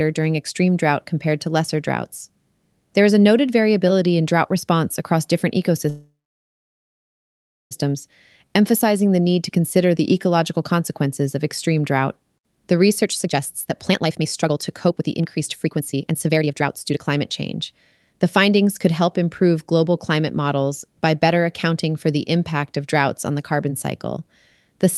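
From 5.89 to 7.73 s packets are likely held up in transit, leaving the jitter buffer empty: a call audio freeze. The receiver stretches the last bit of speech into a short fading buzz, then about 1.6 s of near silence, before resuming exactly where it stopped. Nothing is lost; roughly 1.8 s of delay is simply inserted, so everything after lands later than it should.

Between 13.03 and 18.87 s the overfilled buffer is drained by a jitter buffer speed-up. The receiver repeatedly cuts out tiny pitch-period-sized slices, about 2 s in total, so the speech plays at 131% speed without any change in pitch. It sounds noticeably rushed, with syllables crowding together, while the Opus coding noise and the cutoff near 12 kHz from the call path stay the same throughout.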